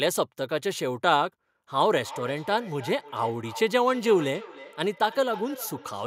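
From 1.98 s to the end, a feedback echo between two devices appears: sound returns roughly every 300 ms, peaking about 17 dB below the speech. A second device in the room replays the call, and the other device's microphone feeds it back uncancelled.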